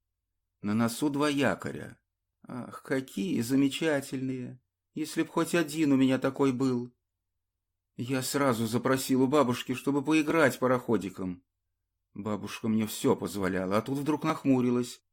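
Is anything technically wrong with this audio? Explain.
Yes. There are two short skips caused by overlap between stream segments, at 10.30 s and 14.30 s. Two consecutive segments carried overlapping time stamps, and the player discarded the overlapping stretch even though that sound had not been duplicated. Roughly 16 ms and 5 ms of real audio vanish, and the waveform jumps from one level to another. The 4-second spacing fits a 2-second segment grid. Each is heard as a tiny skip. On a waveform it shows as a sudden step. On a spectrogram it appears as a thin vertical broadband line.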